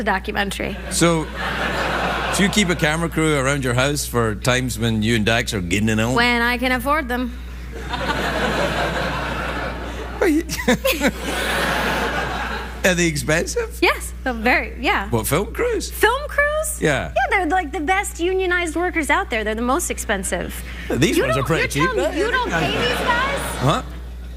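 Mains hum at 60 Hz runs throughout, fairly loud against the sound. Its fixed pitch and harmonics, unlike broadband rumble, point to power-line coupling through a ground loop.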